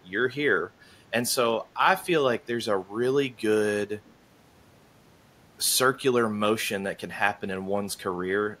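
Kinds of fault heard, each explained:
Echo leak: a very faint scrap of the speech returns 170 ms late near 7.9 s, likely loudspeaker pickup the far-end echo canceller missed.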